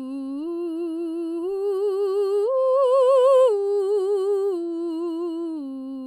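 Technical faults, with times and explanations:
No technical faults detected.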